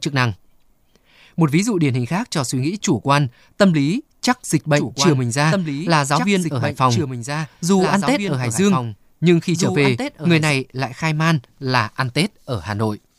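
Speech, with a doubled audio track from 4.77 s, after "tâm lý chắc dịch", to 10.51 s, before "lại khai man là". A full-band copy about two seconds late and around 5 dB quieter starts and stops abruptly with no decay or room colour, which sets it apart from echo or reverb. It likely comes from a second, slower capture path.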